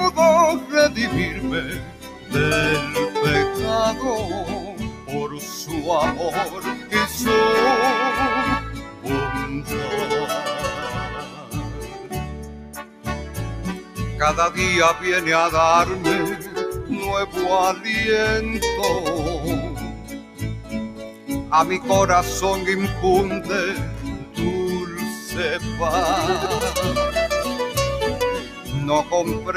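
A noise suppressor applied to music or sounds runs throughout. Built for speech, it treats steady material as noise, so the level swings by around 10 dB and the sound pumps.

The sound is cut by the noise suppressor at 0.6 to 2.32 s, 4.6 to 6.92 s, 8.74 to 13.98 s, 16.42 to 17.85 s, 19.83 to 21.51 s, 24.17 to 25.29 s and 28.4 to 29.12 s. Held parts sink by about 6 to 8 dB, and tails are cut short.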